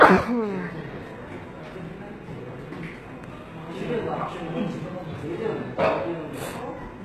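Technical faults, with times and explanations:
Throughout, HE-AAC compression: treble sounds bright but gritty and metallic, with nothing above 12.3 kHz. This is likely band replication copying lower bands upward, fitting roughly 16 kbps, rather than plain dull filtering.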